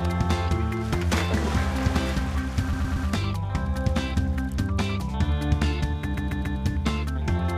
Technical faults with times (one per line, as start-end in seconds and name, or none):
2.72-3.07 repeated frames
6.16-6.57 repeated frames